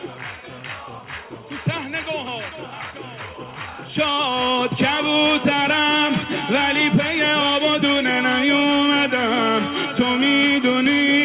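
From 2.49 to 4.71 s, a jitter buffer speed-up occurs. The buffer held more audio than needed, so short pitch-period pieces were cut, about a fifth of a second in total. The sound runs about 9% faster at unchanged pitch and feels hurried, within a band that stops at 4 kHz.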